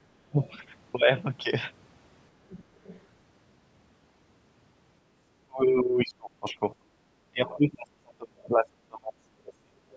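From 0.25 to 0.37 s the speech dips by roughly 25 dB for about a tenth of a second. This is speech suppressed in double talk, likely from an echo canceller turning down the talker while both sides spoke.

At 0.43 to 0.53 s, 2.49 to 2.64 s and 2.84 to 3.01 s, faint scraps of a second voice sit around 25 dB under the talker. This is the other side's voice leaking through, likely loudspeaker echo the canceller failed to remove.

Suppression returns, deeper and longer. From 5.47 to 6.62 s the speech is pulled down, up to about 30 dB, over roughly a second. A short cut of about 35 dB follows at 6.78 to 6.91 s. From 7.31 to 9.82 s the talker is turned down, dropping by as much as 40 dB across roughly two seconds. Inside that stretch, at 7.46 to 7.55 s, another brief fragment of the far-end voice leaks through at a similarly low level.

The call's microphone processing leaves nothing above 8 kHz, as expected for this path.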